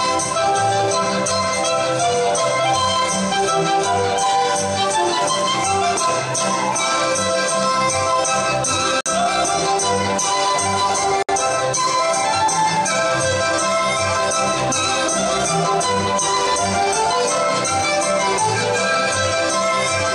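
At 9.01 s and again at 11.23 s the sound breaks for about 50 ms and 61 ms: a gap at a join of encoded pieces, where separately encoded segments kept their encoder start delay and end padding. Unlike a dropout, nothing is lost, because the sound resumes exactly where it paused.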